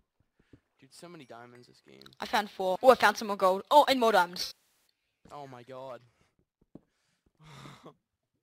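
At 4.44 s, AAC frame loss with concealment sets in and lasts until about 4.64 s. Around 320 ms of audio goes missing, spread in gaps across roughly 430 ms. The longest single gap is around 150 ms. The decoder fills each hole by reusing the last good spectrum, with scrambled signs or interpolated energy. That leaves a smeared, noisy, phasey patch in place of the real sound.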